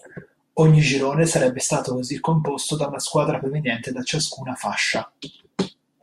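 No technical faults are audible.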